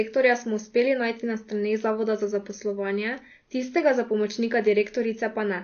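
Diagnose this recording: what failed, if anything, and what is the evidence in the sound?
The speech sounds dull and smeared throughout, with nothing above 6.7 kHz. This is codec-stage damage, likely AAC compression at about 32 kbps.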